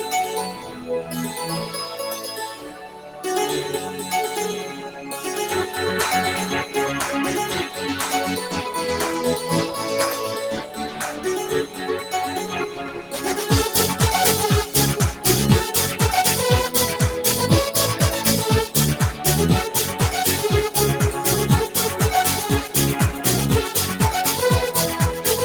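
A noise suppressor applied to music or sounds runs through the whole clip. A suppressor built for speech keeps mistaking sustained, steady material for background noise and turning it down, so the level breathes by around 5 dB as it clamps and releases. Attacks come through, but held parts and decays sag and flutter. On a waveform the envelope pumps between transients, and a spectrogram shows sustained bands thinning and smeared gain changes across frequencies.

Sound cut by the noise suppressor is clearest at six points: 0.54 to 0.86 s (about 4 dB down), 2.56 to 3.21 s (about 7 dB), 4.90 to 5.07 s (about 5 dB), 10.62 to 11.23 s (about 6 dB), 11.66 to 11.83 s (about 7 dB), and 12.68 to 13.18 s (about 7 dB). In each, steady or fading sound gets treated as noise and pulled down harder than its surroundings, so tails shorten and sustains dip audibly. The waveform shows sudden envelope notches, and the spectrogram shows matching darker patches with truncated decays.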